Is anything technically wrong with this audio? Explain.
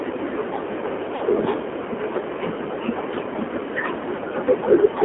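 Yes. The whole clip has been through the AMR narrowband mobile codec. Everything sits in a 200 Hz to 3.4 kHz phone band, and the speech is plainly buzzy and synthetic, which fits a low rate around 7.4 kbps.

There are also lost AMR speech frames at 1.16 to 1.23 s and at 4.16 to 4.19 s. The decoder papered over the gaps by repeating its last pitch and vocal-tract settings at falling gain. You hear a short smeared dip, about two frames' worth in the first and one in the second.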